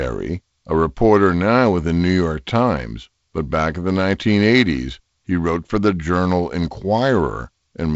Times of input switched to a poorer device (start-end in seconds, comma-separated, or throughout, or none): none